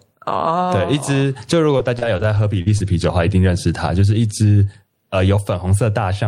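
All the way through there's gain pumping: the background swells between phrases and ducks by roughly 15 dB under loud bits, likely an over-driven mic hitting a fast limiter. From 1.71 to 2.88 s you get repeated packet loss: several short holes, the longest about 41 ms, get patched by stretching earlier sound, so it turns choppy and robotic.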